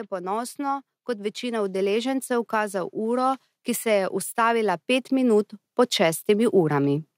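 From 0.09 s to 7.04 s the level climbs by about 12 dB, an automatic gain rising fault: the gain control judged the input too quiet and kept turning it up. The background noise swells along with the speech, which separates it from a talker moving closer.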